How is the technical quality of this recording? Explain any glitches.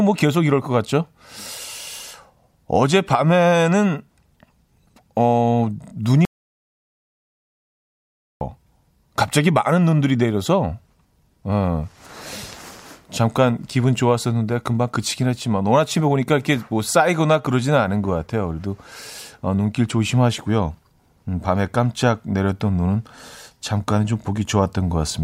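The recording has one clear glitch, an audio dropout to silence from 6.25 to 8.41 s, losing about 2.16 s of speech. The input was likely disconnected or muted while recording continued, so speech cuts off abruptly into dead silence without room tone. The waveform shows a flat line there, and the spectrogram shows a blank vertical band.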